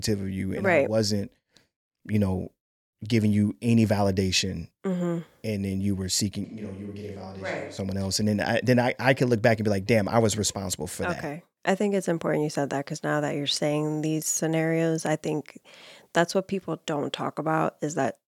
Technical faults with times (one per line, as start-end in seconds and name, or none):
6.44-7.77 switch to a distant microphone